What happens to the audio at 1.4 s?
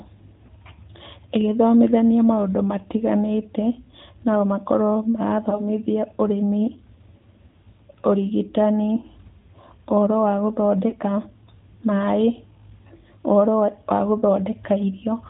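At 1.4 s, as across the whole clip, the speech carries AMR narrowband mobile codec damage. Everything above 4 kHz is gone, and the vocal-tract model rebuilt from sparse pulses leaves a plainly audible buzzy, synthetic edge, which fits a mid-rate mode near 10.2 kbps.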